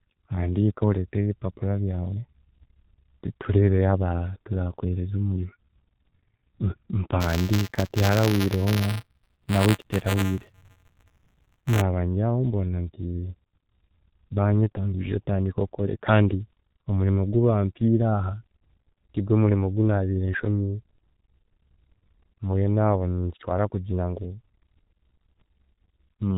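Throughout, the speech carries heavy G.723.1 codec damage at 6.3 kbit/s: nothing above 4 kHz, a hoarse, muffled tone and smeared consonants, because the coder rebuilds the voice from a coarse model updated only every 30 ms. A plain low-pass filter would dull the sound without adding this rasp. From 7.2 to 11.81 s, buffer tearing adds a rattling 188 Hz buzz, which fits a 256-sample buffer. The writing and reading positions cross inside each period, so a small slice of every buffer replays audio from around 15 ms earlier, with hard joins on both sides. Unlike dropouts, there are no silent gaps, and the buzz is present only while sound is present.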